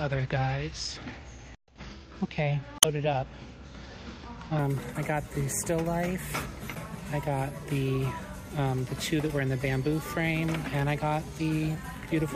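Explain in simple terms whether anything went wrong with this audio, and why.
Two short glitches come from damaged data in a compressed stream. The first runs from about 2.78 to 2.85 s, and the second is a brief blip at 6.75 s. At these points some of the stored or transmitted data was wrong, through lost, blanked or overwritten bytes. The decoder could not read those pieces properly, lost its place, and had to search for the next valid block. You hear that as a quick chirp, squawk, click or short hole.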